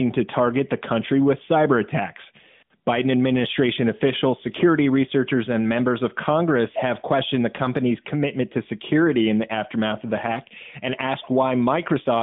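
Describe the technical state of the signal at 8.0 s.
At 8.0 s the signal is intact, with no fault at that moment, only the steady narrowband sound of the mobile speech path at 12.2 kbps, which keeps the audio within roughly 150 Hz to 3.6 kHz.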